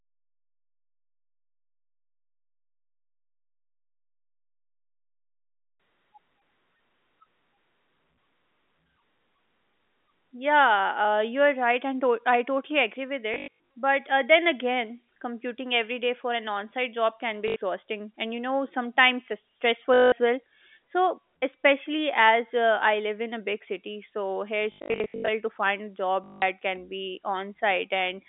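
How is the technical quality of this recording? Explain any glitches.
The speech has some dropouts. It's telephone-band audio, roughly 200 Hz to 3.6 kHz, as you'd expect from a G.711 line, and five patches of packet loss break it up.

Packet loss with the last packet repeated shows up at 13.34–13.59 s, 17.48–17.56 s, 19.94–20.12 s, 24.72–25.28 s and 26.24–26.42 s. When packets went missing, the receiver kept replaying the last one it had. The stutters are consistent with 20 ms packets, so you hear a robotic buzz of about 50 Hz. The worst patch is around 25 s.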